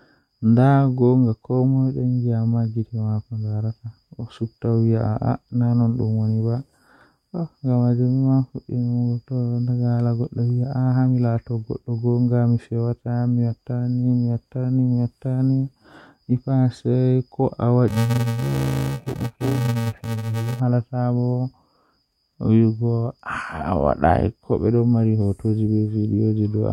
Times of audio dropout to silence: none

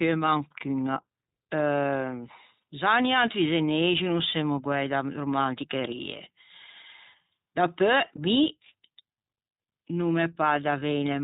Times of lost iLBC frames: 8.16-8.19, 10.80-10.82

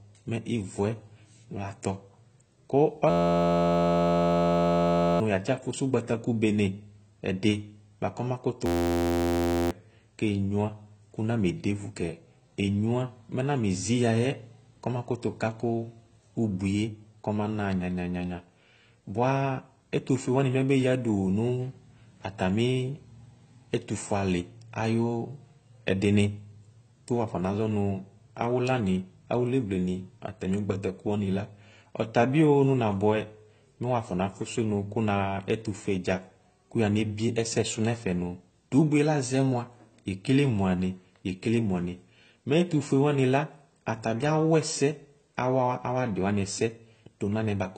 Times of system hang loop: 3.10-5.20, 8.66-9.71

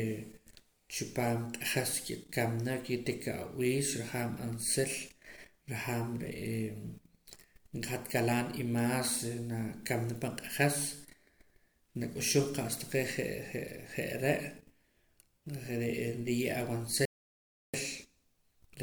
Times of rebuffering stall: 17.05-17.74

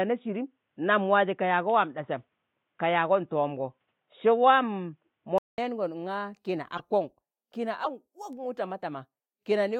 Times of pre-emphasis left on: none

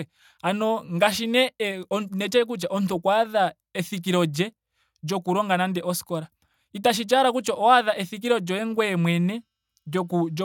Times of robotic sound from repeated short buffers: none

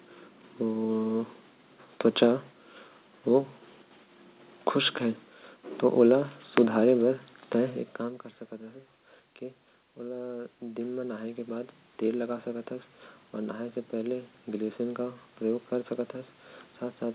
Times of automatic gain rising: 9.98-11.78

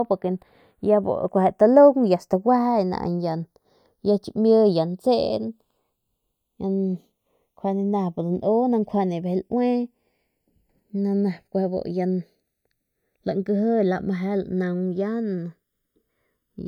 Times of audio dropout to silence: none

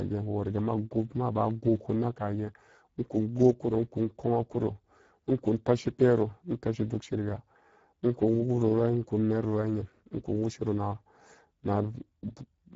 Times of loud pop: none

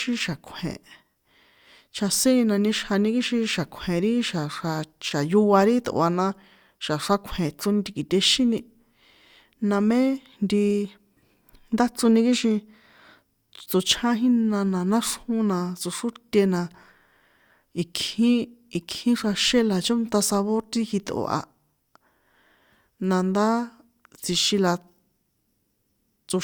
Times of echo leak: none

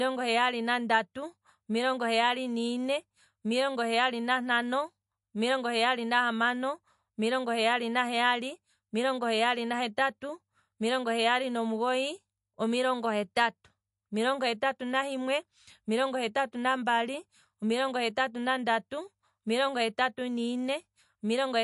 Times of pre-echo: 13.35

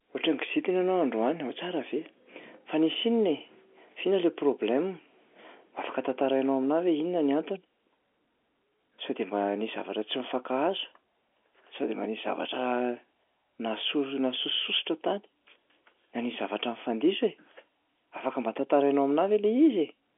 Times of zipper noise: none

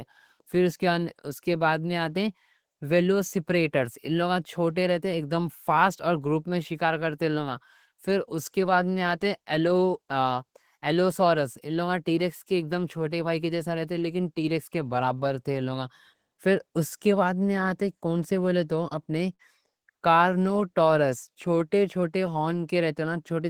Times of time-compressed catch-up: none

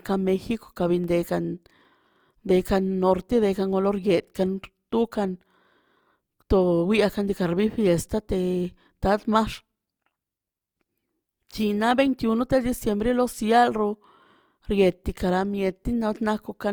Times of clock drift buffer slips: 1.04-16.26

